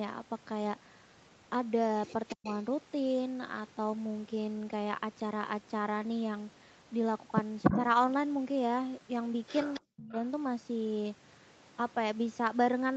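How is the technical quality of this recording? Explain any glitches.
The recording has two recurring call faults, each appearing three times: a leaked echo and short drops in the talker's level. The band stops at 8 kHz, as the call path's Opus coding allows.

Echo leak: A far-end echo canceller likely failed to remove the loudspeaker sound its microphone picked up, so that sound came back delayed by 280 ms. The delayed copy can be heard at 2.27 to 2.54 s and 9.74 to 9.80 s at about 15 dB below the speech. At 7.63 to 7.79 s it is about 5 dB louder than the speech.

Speech suppressed in double talk: When both ends were active, the echo canceller likely could not separate the talker from the echo, and it turned the whole signal down. At 2.35 to 2.46 s the speech nearly vanishes, dropping by around 40 dB for about a tenth of a second. At 7.70 to 7.78 s there is only a slight dip of about 5 dB. 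At 9.80 to 10.17 s the speech cuts out deeply again for about a third of a second.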